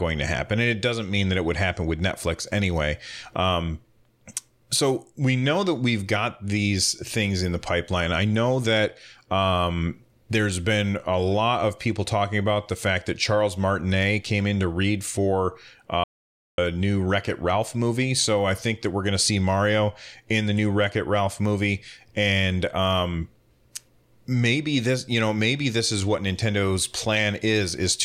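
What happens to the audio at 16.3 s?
At 16.3 s the speech sits inside an audio dropout to silence running from 16.04 to 16.58 s, so about 0.54 s of sound is simply gone. The signal cuts off abruptly mid-flow and resumes just as abruptly, with silence in between, most likely because the input was briefly lost while recording carried on. Unlike a natural pause or a noise gate closing, the gap holds no room tone or hiss at all.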